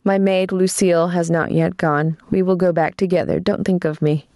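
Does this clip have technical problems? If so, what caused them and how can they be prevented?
Yes. Gain pumping runs throughout: the level is pulled down by roughly 15 dB under loud speech, squashing loud and soft parts closer together. A noise gate would silence the gaps instead. It is likely caused by excessive microphone gain driving a fast limiter. Lower input gain and a gentler, slower compressor prevent it.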